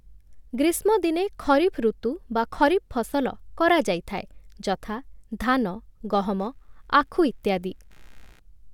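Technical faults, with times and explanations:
6.40–8.40 s, computer activity noise: a faint buzzy chirping, pulsing at around 70 per second and sitting roughly 40 dB below the speech, appears for two seconds and then stops. Changing processor, graphics or mouse load shifts the ground shared with the audio circuit, so the interference follows what the computer is doing rather than the speech. Unlike mains hum, which is steady and locked to 50 or 60 Hz, it starts and stops with that activity.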